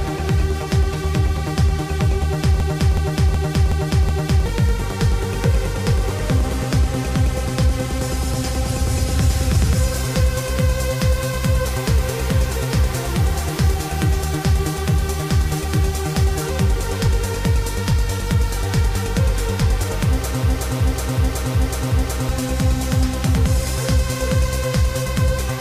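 A system hang loop struck twice, from 2.60 to 4.46 s and from 20.43 to 22.29 s: the system stalled while the audio hardware kept replaying one 0.37 s stretch, which fits a 16384-sample buffer, five times at 2.69 Hz. The result is a machine-gun stutter, and about two seconds of audio are lost each time.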